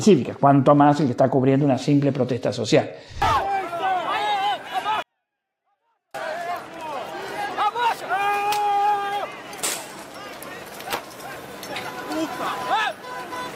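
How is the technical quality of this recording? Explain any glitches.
One fault affects the recording: a brief stretch where the sound almost vanishes.

From 5.02 s to 6.15 s, roughly 1.1 s, there is a 24-bit alignment error that makes the audio too quiet. Samples held as 24-bit values in the low bytes of a 32-bit word were read as full 32-bit integers, so each value lands 8 bits too low. That is a drop of about 48 dB. The sound stays clean but becomes nearly inaudible. On the waveform the envelope collapses to a thin line, and on a spectrogram the band fades almost to the noise floor with sharp edges at both ends.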